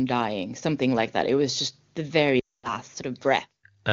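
Radio errors on this AMR wideband (HD Voice) speech call corrupted a run of frames, so lost AMR speech frames cut in from 2.39 to 2.76 s, right after "was just the". The decoder filled the gap by repeating its last good pitch and vocal tract settings at falling gain. The sound drags briefly, then fades quickly to silence, as wideband concealment does. About 240 ms goes missing, which fits a dozen 20 ms frames, and the voice returns weak and rough for a moment.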